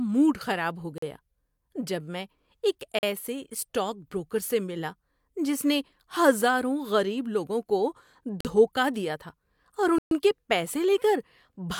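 Four times the output buffer appears not to have been filled in time, leaving a block of digital silence that cuts the speech to zeros and back with no fade. The holes at 0.98, 2.99 and 8.41 s each last about 43 ms, which fits a 2048-sample buffer. The one at 9.98 s runs 128 ms and is heard as a short hole.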